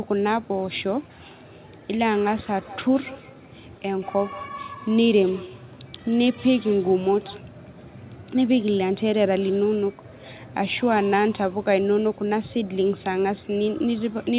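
From 2.61 to 7.51 s there is feedback echo between two devices. A second device on the same call plays the far audio back into a nearby microphone. That microphone's echo canceller cannot remove sound it did not play itself. So the speech returns about a fifth of a second later, thinner and ringing. At its loudest the echo sits about 19 dB below the speech. Both the speech and its echo stop at 4 kHz, as the call path carries nothing higher.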